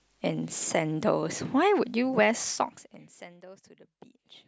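From 2.43 to 3.33 s, a gain reduction in this speech clip is applied in coarse 3 dB jumps rather than as a continuous ramp, so the level falls by about 25 dB in a staircase of roughly seven steps a second. Each abrupt jump leaves a small discontinuity in the waveform, and together they produce zipper noise, a rapid ticking that rides on the speech as it drops away.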